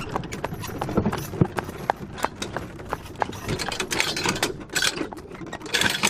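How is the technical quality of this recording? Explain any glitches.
The recording has three short dropouts where compressed frames were skipped, at 1.46 to 1.48 s, 3.55 s and 4.87 to 4.89 s. At each point the decoder never played a run of coded frames, either because they were missing from the file or because it rejected them as damaged. The steps fit a frame of 21.3 ms. Around ten frames, or roughly a fifth of a second, are lost at the first two points, and about five frames, near a tenth of a second, at the third. The sound jumps forward at each join.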